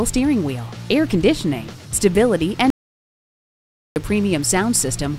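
At 2.70 s the sound cuts off abruptly and the signal drops to silence until 3.96 s, about 1.26 s later, when it resumes mid-flow. This is an audio dropout to silence, likely from the input being lost while the recorder kept writing zeros. Unlike a quiet pause or a fade, the gap holds no room tone or noise floor at all, and whatever occurred during it is simply missing.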